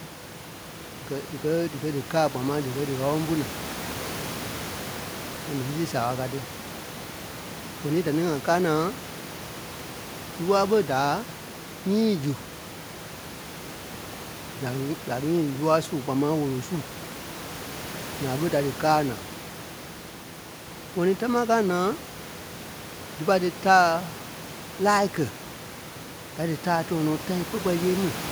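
There are no technical faults to describe in this speech clip.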